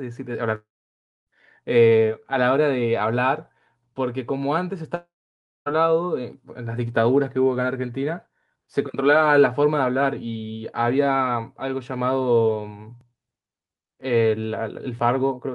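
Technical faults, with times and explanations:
0.55–1.30 s and 4.95–5.69 s, long network dropout: the sound cuts out for about 0.72 s each time. The gap is filled by a brief fading buzz, then about 0.6 s of near silence, and the sound resumes with that stretch missing. This is likely a stall in network delivery. On a waveform it looks like a short decaying tail and then a flat line; on a spectrogram, a smeared band fading into an empty block.
13.01–14.99 s, periodic USB or driver dropouts: about three short ticks, spaced almost exactly 1 s apart. At each one a few milliseconds of audio are skipped, not replaced, so the signal jumps and clicks. The regular spacing points to a recurring bus or driver stall. A waveform shows small step discontinuities at even intervals, and a spectrogram shows thin vertical broadband lines.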